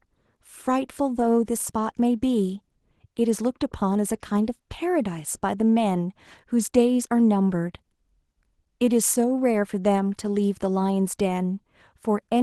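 From start to finish the speech carries Opus voice compression, plainly audible throughout. The codec appears to be running in hybrid mode, with a linear-prediction coder handling the band below 8 kHz and a transform layer filling in the upper range to full bandwidth. The coarseness points to a bitrate near 16 kbps. With so few bits, the excitation is coded roughly, giving the voice a hoarse, slightly buzzy texture.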